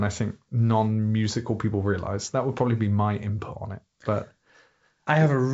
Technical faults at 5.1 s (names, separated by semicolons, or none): none